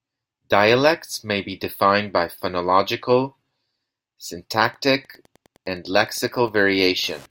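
From 4.45 s to the end of the clip, a steady ticking of Wi-Fi interference sits under the speech, roughly 35 dB below it. A nearby Wi-Fi radio's beacon, repeating every 102.4 ms, is picked up and rectified by the audio circuit, so each transmission lands as a small click, close to ten per second. That slow, even tick sets it apart from mobile-phone interference, whose pulsed buzz repeats far faster and sounds like a rattling chatter.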